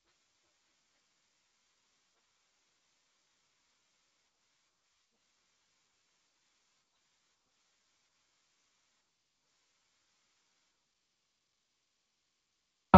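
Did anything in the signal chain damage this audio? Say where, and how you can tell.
No, the speech arrives through a G.722 wideband telephone path at 48 kbit/s, with nothing above about 7.7 kHz and only the light upper-band hiss and slightly noisier lower band that this codec mode itself leaves behind.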